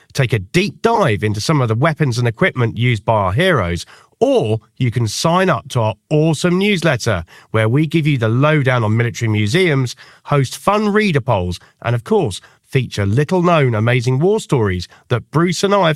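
Speech, with two bursts of corrupt frames decoded and played anyway. From 0.94 to 0.98 s, after "take a deep", there's a glitch. At 11.32 s, after "museums host fun reader", a quieter glitch follows. Each one seems to cover a couple of damaged frames, where garbled gains put energy at the wrong frequencies.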